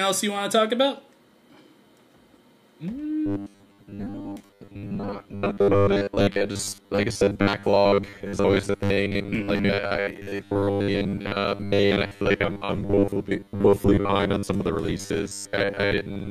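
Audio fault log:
3.26–16.30 s robotic sound from repeated short buffers: a rigid 100 Hz buzz, likely 10 ms chunks replayed over most of the missing audio; a steady pitch rather than dropout gaps.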